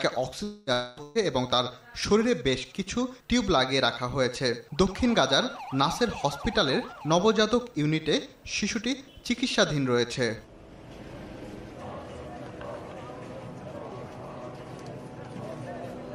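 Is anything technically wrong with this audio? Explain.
Yes. The opening second has three network-loss faults in quick succession.

Long network dropouts, 0.43 to 0.70 s and 0.73 to 1.00 s: each gap covers about 240 ms, and the likely cause is a stall in the incoming stream. For nearly that whole span the receiver keeps extending the last sound it had, heard as a drawn-out buzzy or hissy smear that fades rather than dropping to silence. When the audio returns, the missing stretch is simply gone.

Burst of packet loss, 1.03 to 1.18 s: about 120 ms of audio never arrived in time. The receiver fills the hole by repeating the final sound and turning it down, giving a brief held buzz or fading hiss. The sound then resumes further along, skipping the lost portion. It comes right after the two dropouts.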